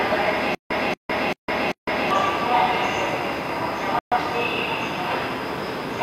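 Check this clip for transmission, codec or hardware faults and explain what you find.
Two faults are present: a stutter with silent gaps and a digital broadcast dropout.

From 0.55 to 2.11 s, the player likely stalled and replayed its last fragment on each retry: a 232 ms burst repeats four times every 390 ms, separated by 158 ms of silence.

From 3.99 to 4.17 s, a digital broadcast dropout occurs as the receiver mutes after losing signal. About 128 ms of sound is lost, consistent with three dropped frames.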